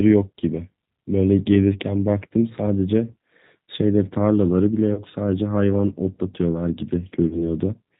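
G.729 codec damage runs through the whole speech clip. The sound is rebuilt from a vocal tract filter, a pitch predictor and a few pulses per frame, leaving it rough and slightly synthetic with nothing above 4 kHz, as expected at 8 kbit/s.

VoIP packet loss concealed by the speech codec occurs at 4.94 to 5.01 s and again at 7.28 to 7.45 s. Each gap fits a single lost packet of about 30 ms. The decoder extends its last pitch and filter into a fading buzzy tone or coloured noise, and the second event stays weak or distorted longer as recovery builds frame on frame.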